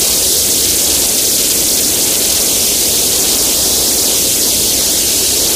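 Nothing in these sounds catches the ear as a technical fault; it just runs along as you'd hope, with no trouble to point out at any moment.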